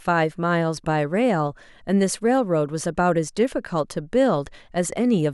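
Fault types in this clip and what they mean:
No technical faults detected in this speech recording.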